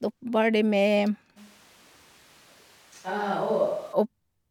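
Speech, abruptly turning roomy and hollow from 1.38 to 3.92 s, about 5 dB quieter with thinner bass and more room noise, likely a switch to a distant microphone.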